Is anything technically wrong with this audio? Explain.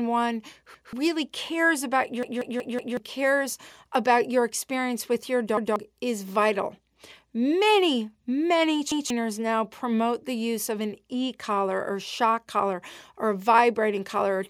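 Yes, the speech has repeated buffer faults at 0.74, 2.23, 5.57 and 8.92 s. Each time, new audio missed its deadline, so the device replayed the last block of about 186 ms, which fits an 8192-sample buffer. The repeat plays once at three points and four times at 2.23 s, giving a stutter with hard joins. About 0.2 s of speech is lost per event, and roughly 0.7 s at 2.23 s. Waveform and spectrogram show identical adjacent blocks with abrupt edges.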